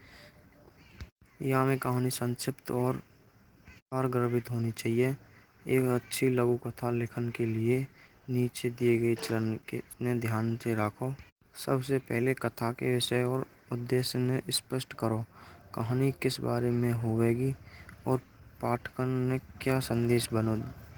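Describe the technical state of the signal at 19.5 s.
At 19.5 s, as throughout the clip, the speech carries sample clock jitter. The converter's timing wanders by what sounds like a few microseconds, so each sample lands slightly off its intended instant. The resulting error tracks how fast the waveform is changing, and it sits roughly 30 dB below the signal. It comes across as a hiss or grain that thickens on loud, bright syllables and drops away in the pauses.

Opus voice compression is also present at 19.5 s and across the whole clip. The coder works in its hybrid form, with linear prediction handling the lower band and a transform layer above 8 kHz. It keeps full bandwidth, with content reaching about 20.2 kHz. The excitation is coded coarsely, however, which fits a bitrate around 16 kbps in 20 ms frames. The damage is plainly audible as a hoarse, slightly robotic texture.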